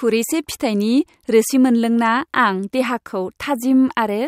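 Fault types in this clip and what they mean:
Nothing stood out on listening to the speech here.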